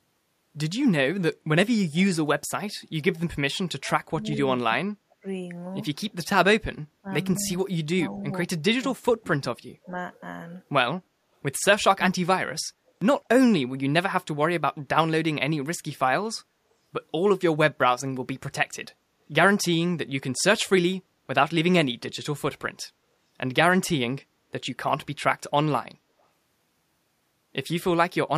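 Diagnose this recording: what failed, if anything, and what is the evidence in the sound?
Call processing failed. The speech drops away in three stretches: 3.79 to 5.24 s, 7.01 to 9.97 s, and 11.95 to 12.62 s. Within each, the level falls by roughly 30, 25 and 35 dB at the deepest. About a second, a second and a half, and under a second of speech are affected. The likely cause is speech suppressed in double talk. An echo canceller, hearing both ends at once, treated the near talker as echo and attenuated it.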